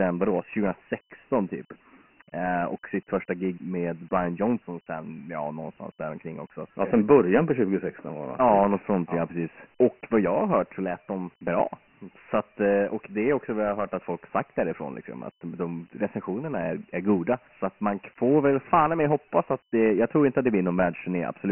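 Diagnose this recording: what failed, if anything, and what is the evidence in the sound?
Dialogic VOX ADPCM damage runs through the whole recording, a codec-stage failure. Nothing in the speech reaches above 3 kHz, and the low end is thinned as by a telephone line starting near 150 Hz. A heavy, gritty hiss rides on every syllable. The 3 kHz ceiling fits 4-bit ADPCM at 6,000 samples a second, about 24 kbps. Each 4-bit step only approximates the waveform, and those coarse errors become the hiss that tracks the speech.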